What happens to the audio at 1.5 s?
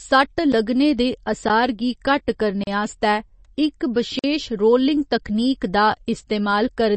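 At 1.49 s there is a block of digital silence: about 12 ms of samples drop to zero with no fade, leaving a tick just before "गी घट्ट", consistent with a late 512-sample output buffer. This moment also carries the band-limited, watery sound present throughout, with nothing above 8.3 kHz, likely from MP3 compression at a low bitrate around 32 kbps.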